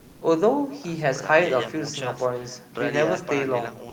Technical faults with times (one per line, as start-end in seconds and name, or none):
0.00-3.92 echo with no canceller
0.00-0.21 comfort noise in place of the background